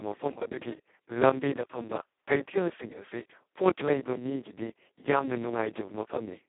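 From start to finish the speech runs through the Speex codec at its lowest quality, which fits a bitrate of only about 2 kbps. With so few bits left for the excitation, the codec behaves almost like a vocoder. The damage is heavy. The speech comes out hoarse, buzzy and robotic, with a grainy noise riding on it. The sound is also squeezed into a telephone-like 250 Hz to 3.5 kHz band, with nothing at all above 3.8 kHz.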